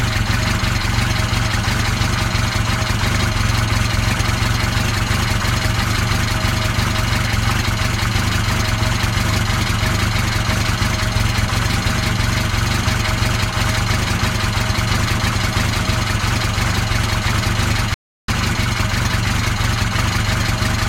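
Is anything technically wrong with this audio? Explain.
Yes. From 17.94 s to 18.28 s there is an audio dropout to silence lasting about 0.34 s. The sound stops mid-flow and resumes abruptly, and the gap holds nothing at all, not even background noise. The likely cause is a brief loss of input, such as a disconnected device, a failed link or a momentary mute, while recording continued and filled the gap with silence. On a waveform this appears as a flat line, and a spectrogram shows a clean vertical dark band.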